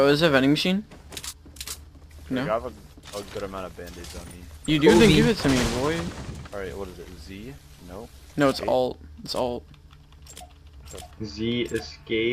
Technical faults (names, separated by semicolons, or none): none